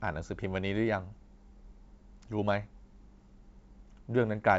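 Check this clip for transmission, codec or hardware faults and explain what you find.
No transmission, codec or hardware faults turn up in the clip.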